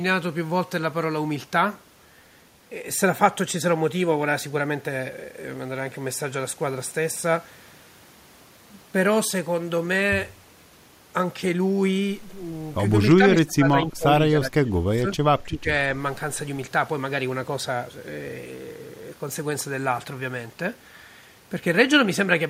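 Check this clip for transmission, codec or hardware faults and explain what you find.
Speech suppressed in double talk, at 13.17–14.07 s, 14.31–15.2 s and 15.43–15.68 s: the speech dips in pieces by roughly 25, 20 and 15 dB, likely an echo canceller unable to separate this side's talk from the simultaneous loudspeaker echo and attenuating both.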